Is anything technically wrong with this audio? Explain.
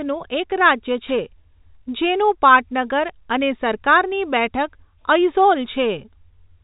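Yes. A wireless microphone noise hit occurs from 1.05 to 1.17 s in this speech clip. The radio link of an analogue FM microphone briefly faded as reflected signals cancelled. Receiver noise rose over the voice for about 0.12 s, heard as a short swish of static. The telephone-style band limit near 3.8 kHz is the expected G.711 coding and not a fault.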